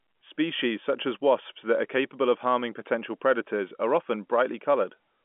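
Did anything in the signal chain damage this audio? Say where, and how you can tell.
No, nothing damaged this audio.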